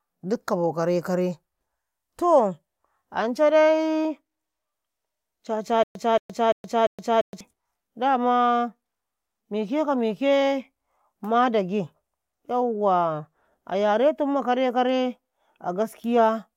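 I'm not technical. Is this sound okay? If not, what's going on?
No. From about 5.83 to 7.41 seconds the speech catches and repeats, a stutter with silent gaps: the same quarter-second scrap (about 0.23 s) plays four times, each followed by about 0.12 s of dead silence, at a steady beat roughly every 0.34 s. The likely cause is playback or streaming stalling, replaying the last bit it had each time it retried, then running dry. Whatever should have been heard during that stretch is missing.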